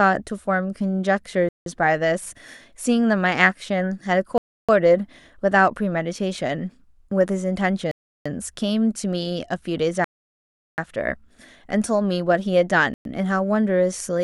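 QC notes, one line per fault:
1.49 to 13.05 s, Bluetooth stall: the speech drops to dead silence at 1.49 s (0.17 s), 4.38 s (0.31 s), 7.91 s (0.34 s), 10.04 s (0.74 s) and 12.94 s (0.11 s), then resumes where it stopped. This is likely buffer underrun while delayed wireless packets are resent. Unlike a plain dropout, it pauses the sound.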